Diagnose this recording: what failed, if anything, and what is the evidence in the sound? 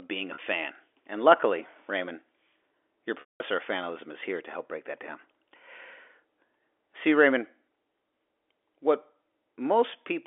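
Packet loss with pitch repetition at the network stage. At 0.34 s, just after "being a", a 40 ms gap is bridged by a held, buzzy repeat of the last pitch period. At 3.2 s a 200 ms loss fades to silence before "of fanalism is here" returns via a short cross-fade. A plain dropout would give a click or abrupt silence instead.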